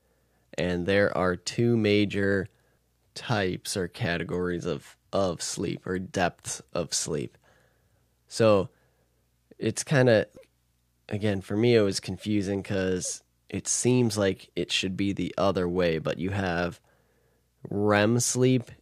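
The speech recording has no audible technical fault anywhere in the signal.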